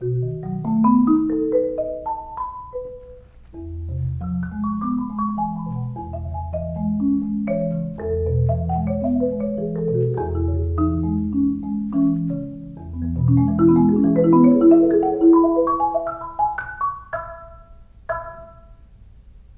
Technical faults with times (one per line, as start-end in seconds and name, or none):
none